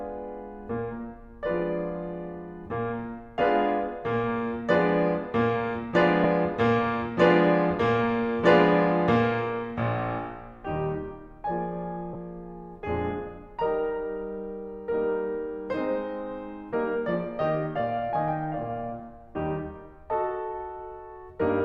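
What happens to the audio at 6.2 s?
A lost LE Audio frame at 6.24 s causes a brief dropout in the music of about 7.5 ms, which fits a single missing Bluetooth LE Audio frame. The LC3 decoder had nothing to decode for that slot and filled it by reusing the previous frame's spectrum with randomised signs. The tones lose their pitch for that instant and turn into a short, noisy smear before normal playback returns.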